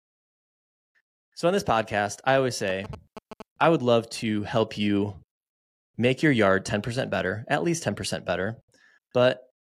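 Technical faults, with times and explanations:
2.70 to 3.66 s, GSM signalling bursts: a galloping dit-dit-dit of short buzzes cuts across the speech for about a second, sitting roughly 10 dB under it. That's a 2G phone nearby firing off its signalling bursts while it talks to the network. The audio circuitry rectifies the radio energy, so each group of bursts lands as a short buzz and the bursts inside it repeat at about 217 Hz, which gives that rasping buzz.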